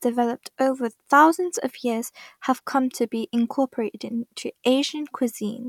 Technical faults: none

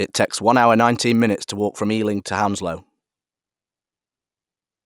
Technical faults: resampler restarted on every block

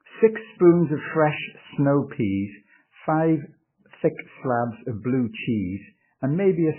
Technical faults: MP3 compression

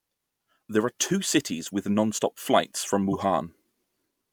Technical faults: corrupt frame decoded

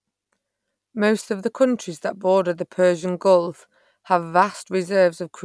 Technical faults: none

